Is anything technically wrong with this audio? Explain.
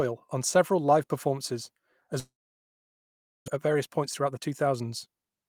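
Yes. There are two faults, one after the other.

From 2.19 to 3.50 s, just after "on several live performances", the sound breaks off. A brief fading buzz carries the last sound, then about 1.2 s of near silence follows. When the audio resumes, a stretch of about 0.86 s is simply gone. This is likely a long network dropout. Packets stopped arriving, and the receiver padded the gap before giving up. The delay also grew by roughly 0.4 s.

From 3.54 to 5.45 s there is a jitter buffer speed-up. The audio runs at about 114% of normal speed. The pitch stays the same, but the speech sounds hurried. The receiver was holding too much buffered audio after the outage. It trimmed tiny pitch-period slices, many in a row, to catch up. Roughly 0.3 s was removed this way.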